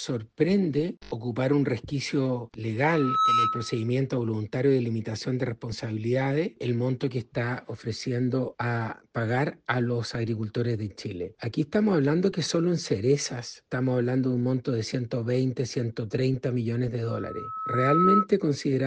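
Loudspeaker feedback squeal at 2.84–3.92 s and 17.04–18.27 s: a microphone re-amplifies its own loudspeaker until a 1.3 kHz tone runs away. The first swells within half a second to sit roughly 5 dB above the sound; the second builds over about a second to roughly 10 dB above it.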